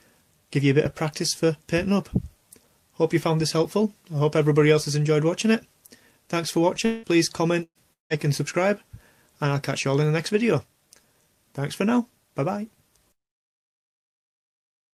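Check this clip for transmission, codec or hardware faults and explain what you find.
Three transmission faults land close together between about 6.85 and 8.13 seconds. Two sound like long network dropouts and one is a burst of packet loss.

Long network dropout, 6.85–7.06 s and 7.93–8.13 s. Each gap takes out about 180 ms of audio, likely because the stream stalled. The receiver stretches the last sound into a fading buzz or hiss for roughly 170 ms. The second gap sinks to near-silence for about 150 ms before the sound picks up again further along.

Burst of packet loss, 7.63–7.78 s. Around 120 ms of packets went missing or arrived too late. The decoder filled the hole by repeating and fading the previous sound, with about 50 ms of that tail close to silent. When the audio resumes, the missing stretch is simply skipped.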